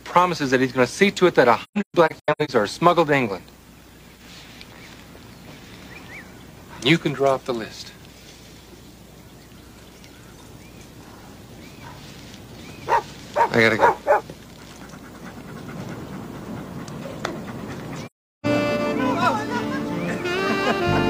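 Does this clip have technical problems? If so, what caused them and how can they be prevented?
Yes. AAC frame loss with muting causes soft gaps. From 1.63 to 2.51 s the sound drops out in scattered holes, the longest about 150 ms. It goes silent again from 18.06 to 18.46 s. The decoder zeroed the missing frames, so overlapping windows fade out and in. Retransmission or error concealment prevents it.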